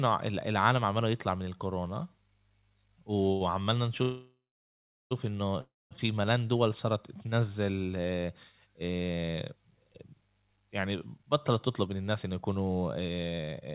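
At 3.32 s a packet of this speech arrived late, and the jitter buffer ran dry for a moment. In this short stall from a late packet, the receiver held the last sound for about 83 ms until 3.42 s and then picked up exactly where it had stopped. Nothing is lost. One sound is simply drawn out slightly too long, with a faint buzzy smear where the repetition fills the wait.

From 4.02 s to 5.13 s comes a call audio freeze, likely caused by packets being held up in transit so that the jitter buffer emptied completely. The receiver carries the last sound forward as a fading buzz that dies into about 0.74 s of silence, and after this gap of just over a second the speech resumes where it stopped. A second, shorter freeze from 5.61 s to 5.93 s behaves the same way: about 0.3 s is inserted, including about 0.22 s of silence, before the speech continues with nothing skipped.

Those held-up packets then seem to arrive together, leaving the buffer holding more audio than it aims for. 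From 11.49 s to the end, a jitter buffer speed-up trims that surplus by repeatedly cutting out tiny pitch-period-length slices, roughly a third of a second in total. The speech runs at about 112% of its normal pace with the pitch unchanged, so it sounds noticeably hurried. Throughout, the G.711 call path limits everything to below 4 kHz.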